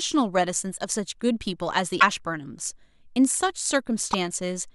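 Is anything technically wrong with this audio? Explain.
Yes. Short glitches at 1.97 to 2.03 s and at 4.13 s come from damaged data in a compressed stream: corrupted frames make the decoder misread the frames and resynchronise.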